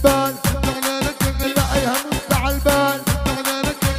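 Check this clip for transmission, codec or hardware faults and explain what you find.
One transmission fault is audible: a skip ahead at 1.43 to 1.45 s. A stretch of audio, something like 0.4 s, was discarded, either lost in transit or thrown out by an overflowing jitter buffer that already held later audio, so the playout delay dropped by about the same amount. Nothing was inserted to cover the loss. The sound on either side is spliced almost directly, and the audio lurches forward abruptly with a chunk simply missing.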